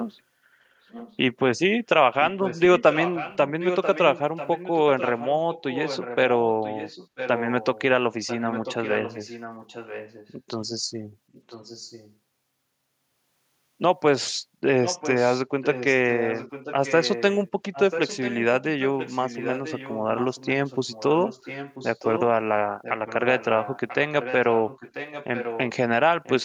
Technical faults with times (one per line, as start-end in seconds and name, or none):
0.05-0.11 echo leak
0.90-1.17 echo leak
2.20-7.82 echo leak
8.26-10.34 echo leak
11.32-12.15 echo leak
14.85-22.23 echo leak
22.82-25.60 echo leak
26.23-26.44 echo leak